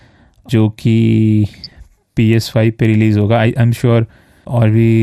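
Throughout, the speech sounds dull with a plainly audible gurgling, granular texture as upper bands drop in and out, likely MP2 compression at a low rate consistent with 80 kbps.

From 1.44 to 1.76 s, DAB burbling appears: bit errors slip past the error correction into the coded sub-band data, producing bubbling, watery blips confined to individual frequency bands.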